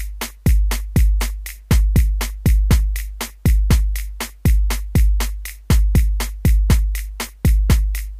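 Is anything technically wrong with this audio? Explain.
Yes. At 1.21 s there is an electrical switching spike, a sharp snap on top of the sound. It is likely a nearby switch arcing into the audio line.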